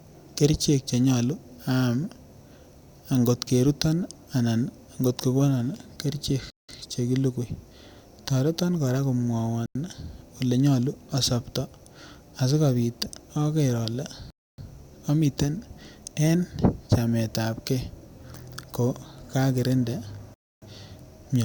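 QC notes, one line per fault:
6.50 to 6.69 s, block of digital silence: right after "kot ko konon kerichek" the speech drops to 186 ms of silence, consistent with an 8192-sample buffer not filled in time, cutting out and back at hard edges.
9.66 to 9.75 s, block of digital silence: a 93 ms hole, consistent with a missed 4096-sample buffer, cutting in and out without a fade, so it is heard as a brief gap.
14.30 to 14.58 s, block of digital silence: a 279 ms run of zeros just before "amite n", long enough to hear as a clear dropout with an abrupt cut and resumption.
20.34 to 20.62 s, block of digital silence: after "ko kakirinda" the output is again zeroed for 279 ms. With no fade at either boundary, the hole starts and stops abruptly.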